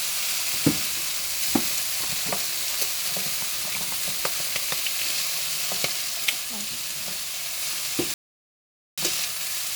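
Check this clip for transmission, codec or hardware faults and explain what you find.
There's one fault here: a rebuffering stall from 8.14 to 8.98 s. The player ran dry, went silent, then picked up exactly where it left off, adding 0.84 s.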